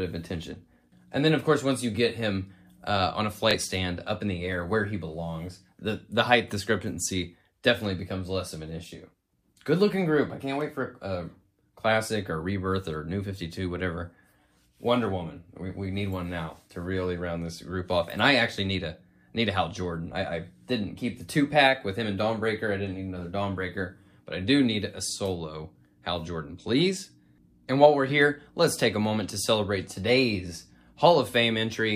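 There's one glitch in this audio, a Bluetooth stutter at about 3.51 to 3.55 s. You hear a quick repeat where the receiver ran out of fresh data and replayed its last chunk. The repeated slice is about 23 ms long, which fits a single dropped or late packet over the wireless link. After that the sound picks up further along, as if it had kept playing through the gap.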